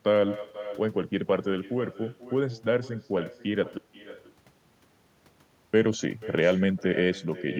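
From the first second to the last, the speech is trailed by echo with no canceller. Somewhere at the far end the call is playing out of a loudspeaker, the microphone there is catching it, and nothing is stripping it back out. So every phrase comes back roughly half a second later, about 15 dB down, sounding thinner than the original, like a faint ghost following the talker around.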